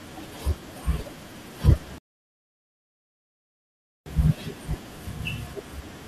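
A rebuffering stall interrupts the speech from 1.98 s to 4.06 s. The player ran dry of downloaded audio and waited for more, so the sound drops to silence for about 2.1 s, then picks up exactly where it halted, adding time without losing anything.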